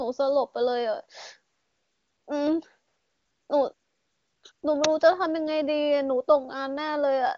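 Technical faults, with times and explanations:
1.53–2.27 s, 2.87–3.49 s, 3.73–4.43 s and 4.51–4.63 s: AMR comfort noise. The phone stopped sending speech frames for 740, 620, 700 and 120 ms, and the receiver filled each gap with synthetic hiss. On a spectrogram, the real background gives way to smooth, uniform noise bands with abrupt edges. The waveform shows flat, even-level stretches that switch in and out, while the HD Voice wideband speech around them stays clean.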